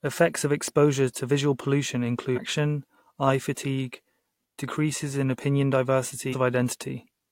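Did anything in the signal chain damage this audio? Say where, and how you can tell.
Yes, and it sits at the codec stage: there's damaged data in the compressed stream. You get two short glitches in the speech, one from 2.33 to 2.39 s and another from 6.29 to 6.35 s, each only about 60 ms long. That's what happens when a stretch of the encoded bitstream is corrupted. The decoder misreads those frames, loses sync, and spits out garbage until it locks onto the next valid frame header.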